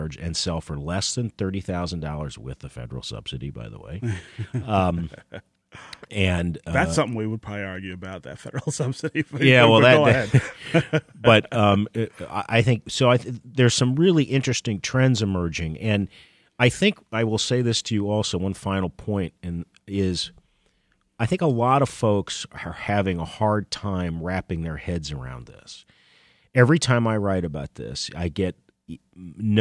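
Nothing in the speech signal registers as a technical fault: level, continuity and timing hold steady across the whole recording.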